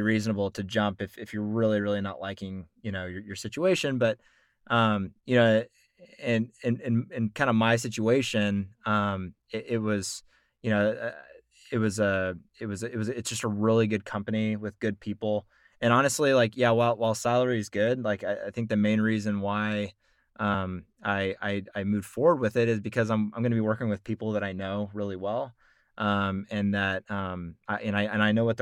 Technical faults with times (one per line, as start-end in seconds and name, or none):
20.53 compressed frames skipped